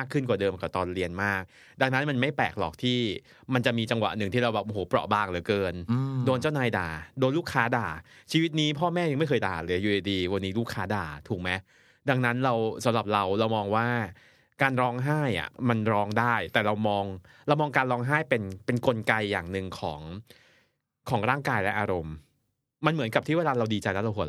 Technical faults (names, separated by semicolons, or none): none